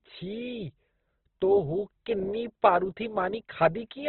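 Opus compression runs through the whole of this speech clip, and the damage is heavy. Nothing is present above about 4.2 kHz, so the sound is narrowband and muffled. What remains is grainy and rough rather than swirly: the encoder keeps each band's energy but, short of bits, fills band detail with folded lower content or noise. That coarse texture points to a very low rate, likely around 12 kbps.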